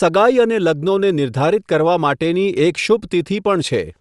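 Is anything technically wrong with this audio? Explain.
Yes. Throughout the speech, the audio likely went through Bluetooth LC3 compression, a transform codec whose coarse spectral coding fits a 48 kbps, 7.5 ms-frame stream, leaving a plainly audible breathy, grainy edge.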